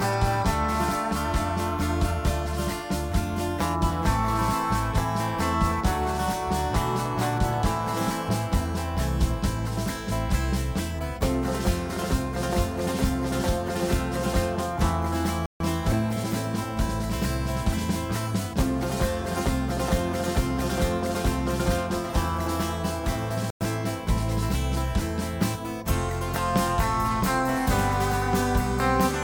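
The audio drops out twice, at 15.46 s for about 144 ms and at 23.50 s for about 105 ms, the pattern of a Bluetooth stall, where the wireless link likely held packets back until the headphones' buffer emptied and playback simply halted before resuming. On a waveform each gap is a flat line cutting cleanly through the signal; on a spectrogram it appears as a narrow full-height blank column, with content returning abruptly on the far side.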